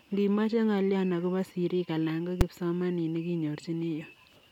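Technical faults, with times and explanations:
2.41 s, invalid numbers at full scale: a calculation produced invalid values that were pinned to maximum level for a block of about 5 ms, heard as one sharp bang.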